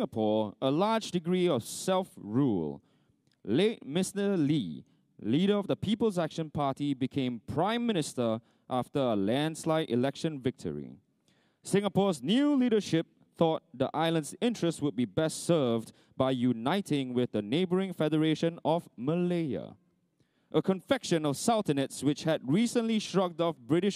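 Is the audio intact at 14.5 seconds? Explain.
Yes, at 14.5 seconds the audio is intact, with no dropout, click, distortion or other fault audible at that point.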